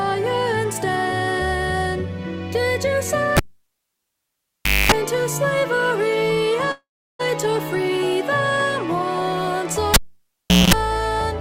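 A cable pulled and plugged in at 3.37 s pops, drops to near silence for about 1.5 s, then carries a 240 ms burst of 50 Hz mains buzz as only the plug tip makes contact, before a second pop at 4.92 s restores the sound. From 6.71 s the sound stretches into a fading buzz and then about 0.34 s of silence. It resumes at 7.21 s with roughly half a second missing, likely a long network dropout concealed by the receiver. The same cable fault recurs from 9.94 s to 10.74 s, with about 0.75 s unplugged and a 210 ms burst of 60 Hz buzz between the two pops.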